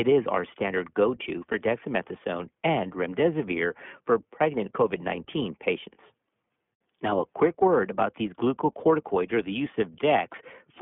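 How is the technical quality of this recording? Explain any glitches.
The recording's technical quality is limited by one fault, iLBC codec coding, present throughout the speech. The speech passed through a narrowband VoIP codec that codes each short frame's excitation independently, which fits iLBC's 15.2 kbps mode with 20 ms frames. The line band sits at roughly 150 Hz to 3.4 kHz, and nothing passes above 3.7 kHz. The damage is plainly audible as a slightly rough, synthetic texture. On a spectrogram, energy stops at a hard ceiling near 3.7 kHz with empty space above, and the waveform looks thinned of low bass.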